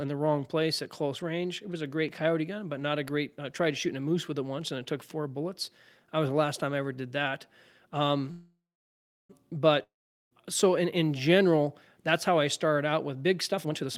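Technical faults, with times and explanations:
8.31–9.31 s call audio freeze: the last sound stretches into a fading buzz, then about 0.69 s of silence. Speech resumes where it stopped, likely after delayed packets emptied the jitter buffer.
9.83–10.41 s long network dropout: a brief fading hiss gives way to about 0.42 s of silence, and speech returns further on with roughly half a second lost, likely from packets that never arrived.
13.52–13.89 s jitter buffer speed-up: speech runs at 164% speed with unchanged pitch and sounds hurried, as repeated pitch-period cuts remove about 0.3 s to shrink an overfilled buffer.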